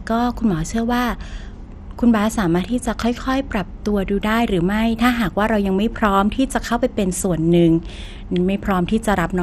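MP2 compression runs through the whole of the speech, from start to finish. The sound is dull, with nothing above about 14.8 kHz, and carries a plainly audible gurgling, granular roughness. The likely cause is MPEG Layer II coding at a low rate, something near 64 kbps. It splits the signal into sub-bands and rations bits among them, switching upper bands off and quantising the remaining ones coarsely, so detail flickers and grinds.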